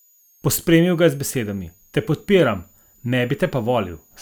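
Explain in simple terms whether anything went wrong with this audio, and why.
A switching supply whistle runs faintly through the whole clip, a thin high tone wandering between about 6.4 and 7.0 kHz behind the speech. It comes from a switching power supply whose rapid on-off cycling has dropped low enough to be heard, and its pitch shifts as the supply's load changes.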